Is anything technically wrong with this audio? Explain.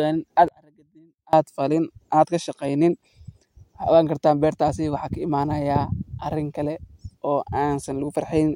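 Yes. One channel inverted, from 0.48 to 1.33 s: the speech suddenly drops by about 30 dB, likely because one stereo channel has reversed polarity, so the centred voice cancels against its mirror copy when the channels are summed, leaving only a faint residue.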